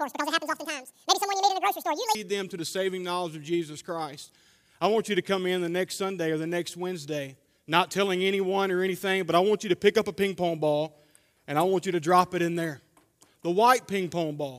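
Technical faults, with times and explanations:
0.00–2.15 s, audio read two samples at a time (double speed): the reader took each pair of samples as one frame, as if the stream had two channels or wider samples, so the sound runs twice as fast and an octave higher.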